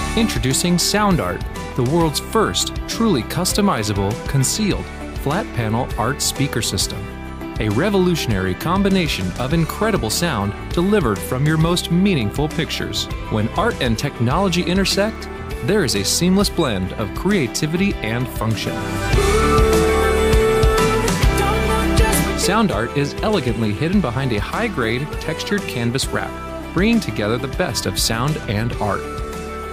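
Nothing in the audio stands out as a technical fault at any point, so there's nothing to flag here.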